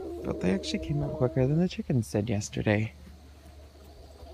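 No technical faults are audible.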